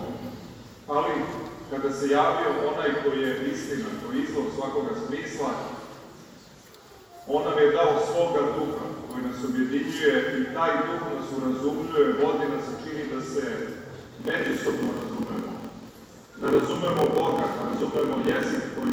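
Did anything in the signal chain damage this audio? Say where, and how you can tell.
Yes: a buffer-stage block size mismatch (padded) from 14.0 s on. Zero-filled gaps, fitting a 1024-sample read, buzz at 43.1 Hz and slow playback to 0.938 speed, with timbre kept, unlike resampling.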